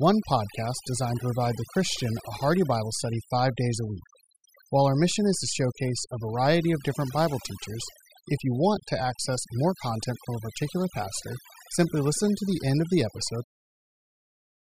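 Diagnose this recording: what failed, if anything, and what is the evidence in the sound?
The fault is overdone noise removal in the call processing stage, and it runs throughout. Between phrases the background drops and breaks up into twinkling specks. The suppressor is cutting individual frequency bands whenever they fall near its noise estimate, and quieter speech detail goes with them, even into the smooth fade-out near 13.5 s.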